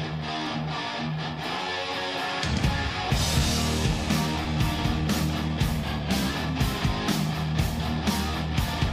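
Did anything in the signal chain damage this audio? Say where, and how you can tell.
Yes. At 0.47 s, two stream segments have overlapping timestamps, and the player discards the overlap even though that audio was never actually doubled. A tiny piece of sound vanishes and the waveform jumps, heard as a brief click or skip. This points to the streaming segmentation stage.

From 5.79 to 6.30 s the audio slows by 5.33% and its pitch drops by about 95 cents, close to a semitone, then snaps back to normal. This is likely a drift correction step in the buffer stage, where clock-matching software changed the playback rate in a single jump.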